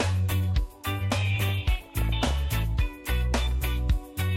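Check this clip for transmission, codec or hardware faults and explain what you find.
One fault is audible: DAB burbling from 1.36 to 2.33 s. Weak reception lets bit errors, at around half a percent, slip past the error correction into the MP2 audio data. Corrupted samples then put short blips of noise in single sub-bands, and corrupted scale factors make individual sub-bands jump in level for up to a frame, and the density points to several dozen damaged frames. The result is a bubbling-mud texture with chirps and squelches over the audio. A spectrogram shows short rectangular blocks flaring in isolated frequency bands, and the waveform carries brief irregular bursts.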